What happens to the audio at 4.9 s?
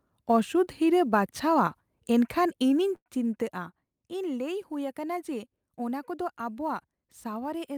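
The converter's sampling clock wanders by a few microseconds, a sample clock jitter present throughout the clip, including at 4.9 s. Its timing errors grow with the waveform's slope, adding a faint hiss or roughness, about 40 dB below the speech, on louder, brighter sounds.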